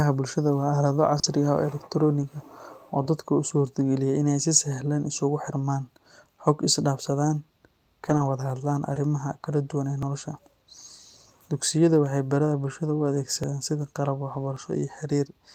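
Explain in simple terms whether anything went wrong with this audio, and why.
Brief smears or wobbles at 1.19 to 1.25 s and at 8.94 to 8.98 s, just after "wada hadlaan" and before "kala duwan ee nolosha", are short concealed packet loss. Pieces of the call arrived too late (40 ms, then 20 ms), so the receiver stretched the preceding sound to cover the gaps.

Rough, noisier patches at 1.23 to 1.25 s, 2.21 to 2.23 s, 8.05 to 8.27 s (just before "wada hadlaan"), 8.96 to 8.98 s and 14.33 to 14.39 s are lost packets rebuilt from error correction. The next packet carried a cruder backup copy, so nothing goes silent, but those moments sound grainier.

Jumps forward in the sound at 8.5, 10.03, 13.44 and 14.57 s are likely a dropped buffer (overrun). The computer didn't collect the audio in time, so a few milliseconds were overwritten and the two sides were joined directly.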